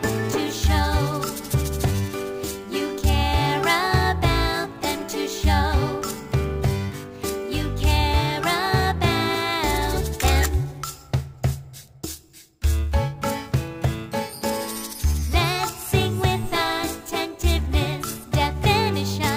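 Throughout, each sample was simply held while the rate was raised, which fits an original rate near 22 kHz. The result is imaging from sample-and-hold upsampling: mirrored copies about 20 dB down, the lowest spanning roughly 11 to 22 kHz, heard as a bright metallic fizz tracking the sound.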